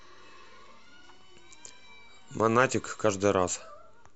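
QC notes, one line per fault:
1.15 s, DAB burbling: weak DAB reception let a small number of bit errors slip past the error correction into the MP2 audio data. Corrupted samples put short blips of noise in single sub-bands, and corrupted scale factors make individual sub-bands jump in level for up to a frame. In this speech, that produces a few brief watery blips laid over the sound. Four frames were damaged, consistent with a very low error rate.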